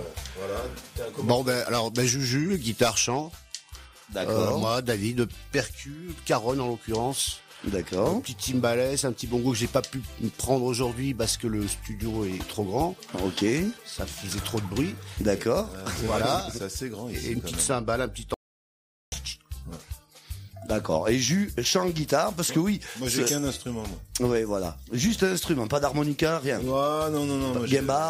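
At 18.34 s there's an audio dropout to silence lasting about 0.78 s until 19.12 s: dead silence, no room tone, likely a momentarily lost input.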